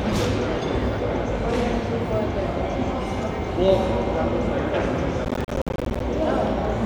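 From 5.25 to 6.0 s the sound is broken up by processor overload crackle. The processor falls behind and misses a long run of buffer deadlines, roughly thirty of them. Each miss drops in a short stretch of silence, which fits buffers of around 10 ms. The hard-edged gaps come so close together that they are heard as a gritty tearing that stops once the load clears. On a waveform the signal is chopped by rapid flat dropouts, and a spectrogram shows a dense band of thin vertical broadband lines.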